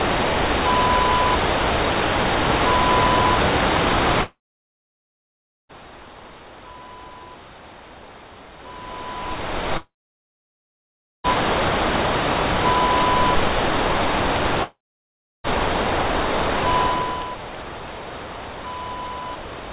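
Three gaps at 4.22–5.71 s, 9.77–11.26 s and 14.63–15.46 s sound like a long network dropout: a brief fading tail, then silence, likely lost packets. The audio is band-limited to 4 kHz, as G.711 would give.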